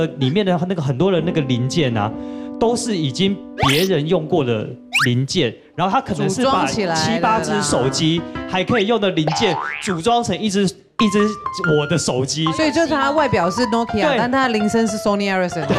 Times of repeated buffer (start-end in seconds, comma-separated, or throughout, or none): none